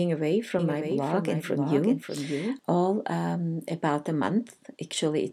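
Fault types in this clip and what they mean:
Doubled audio track: a full-band copy about 5 dB quieter trails roughly half a second behind, likely from a second capture path; spectrogram shows shifted, abruptly bounded repeats.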